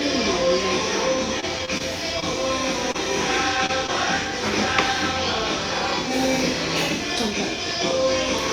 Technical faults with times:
1.40-1.82 repeated stalls (stutter)
2.20-2.24 short concealed packet loss
2.92-2.96 short concealed packet loss
3.66-3.90 short concealed packet loss

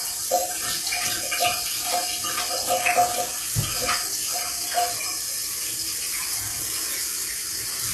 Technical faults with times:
0.00-7.94 HE-AAC compression

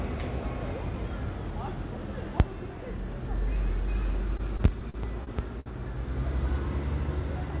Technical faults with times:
4.37-5.69 repeated stalls (stutter)

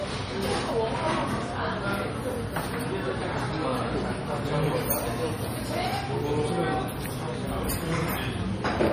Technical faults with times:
0.00-8.93 MP3 compression

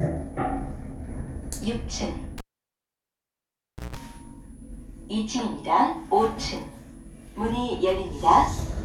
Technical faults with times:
2.38-3.97 cable pulled and plugged in

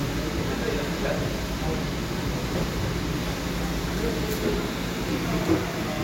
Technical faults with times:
5.09 damaged data in a compressed stream

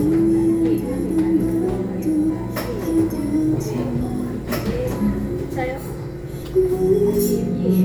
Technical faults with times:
2.29 compressed frames skipped
3.59 compressed frames skipped

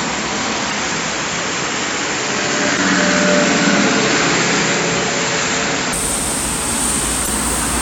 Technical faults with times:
0.00-5.93 input switched to a poorer device
0.69-0.73 damaged data in a compressed stream
2.75-2.79 damaged data in a compressed stream
7.24-7.28 damaged data in a compressed stream

